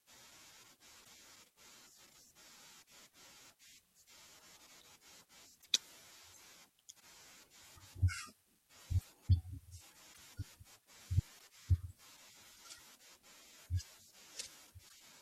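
At 1.03–1.09, 2.81, 5.61–5.66, 6.99, 9.00–9.06, 10.12–10.18, 11.38–11.43 and 14.88–14.92 s the speech jumps ahead with a short chirp or gap. That's likely a broken MP3 bit reservoir: frames went missing, so the next ones decoded borrowed bits from the wrong place. The MP3 frames here are 26 ms long.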